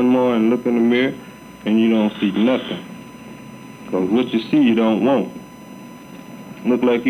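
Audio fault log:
Throughout, USB whine: current drawn by the USB bus in 1 ms frames leaks into the audio through the shared power or ground, leaving a steady 1 kHz tone at a fixed pitch, sitting about 30 dB below the sound.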